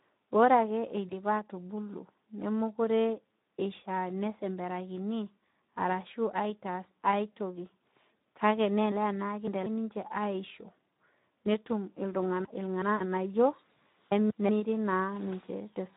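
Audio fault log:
Throughout: Speex codec. The speech sounds hoarse and grainy, which fits a low bitrate around 11 kbps starving the excitation of bits.
1.07–1.14 s: VoIP packet loss concealed by the speech codec. Right after "ore ake", one 20 ms gap gets papered over with a fading stretch of the last sound, then the voice stays weak briefly.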